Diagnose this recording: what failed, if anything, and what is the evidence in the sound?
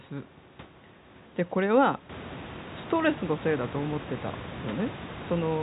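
Nothing here has failed: what you hear is speech over an ordinary G.711 phone line, with everything above about 3.9 kHz gone as that format dictates, and room noise sitting about 23 dB below the voice that rises by about 16 dB around two seconds in, which is simply the room itself getting louder.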